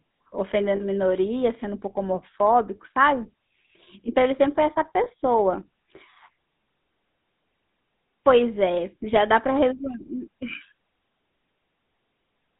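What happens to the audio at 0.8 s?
From 0.76 to 0.83 s there are lost GSM frames: about 40 ms of damaged audio, which fits two 20 ms frames. The decoder fills the gap by reusing the last good frame's settings, so the sound is held as a short, rough, metallic ring rather than dropping out. On a spectrogram the harmonics there freeze into flat, smeared horizontal bands. The waveform shows a repeated pattern.

Underneath, as across the whole clip, the GSM full-rate codec at 13 kbps gives the speech a buzzy, gravelly roughness. It models the vocal tract and drives it with a coarse, regularly spaced pulse excitation. The line band runs from about 150 Hz to 3.7 kHz, so a spectrogram shows a hard ceiling near 3.7 kHz with nothing above it, a thin floor, and grainy, blotchy harmonic structure.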